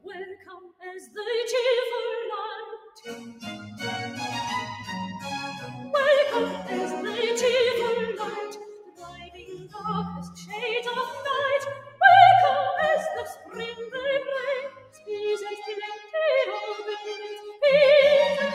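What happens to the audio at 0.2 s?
At 0.2 s the sound is being cut by the noise suppressor. This runs from the start to 1.18 s. The suppressor has judged the opening sound to be noise and pulled it down harder than what follows. The deepest drop is about 19 dB. Roughly a second of sound is affected in total. Sustained and decaying parts sink most, so the opening sinks in level and its tails are clipped short.

The cut happens because a noise suppressor designed for speech is active across the whole clip. It mistakes steady tones, ambience and reverb for background noise and lowers them. Its gain swings by around 10 dB. Sharp onsets mostly pass. Held sound and decays get pushed down. This is already at work at 0.2 s.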